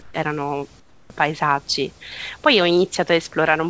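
At 0.02–0.14 s and 0.80–1.10 s, comfort noise in place of the background, likely from discontinuous transmission: flat, detailless hiss, about 4 and 10 dB quieter, not a dropout's silence.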